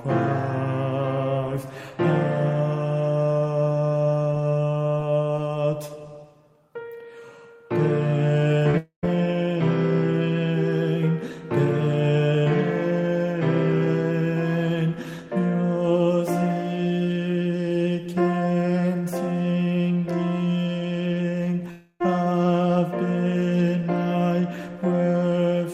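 The audio has two clusters of transmission damage. Short concealed packet loss shows up at 8.59–8.63 s and 8.71–8.76 s: roughly 20 ms of audio went missing each time, and the receiver covered the gaps by extending the preceding sound for 13 ms and 28 ms before blending back. The result is a quick smear or wobble rather than a clean cut. Right after that, from 8.77 to 9.05 s, a long network dropout is the likely cause of a 260 ms hole. A fading continuation of the last sound covers about 250 ms, ending in roughly 120 ms of silence, and the sound then resumes further on. The same long-dropout pattern likely recurs at 21.71–22.02 s, where 300 ms is lost and about 290 ms of fading fill is followed by only a brief 20 ms silent gap.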